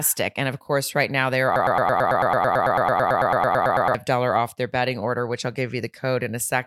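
From 1.56 s to 3.95 s the speech locks into a broken-record loop: a fragment of about 110 ms plays 22 times back to back, giving a rapid, mechanical stutter at roughly nine repeats per second. The likely cause is a stalled player or stream resending its last buffered piece, so the speech due in those seconds never arrives. A waveform shows identical blocks tiled edge to edge, and a spectrogram shows the same short pattern stamped repeatedly.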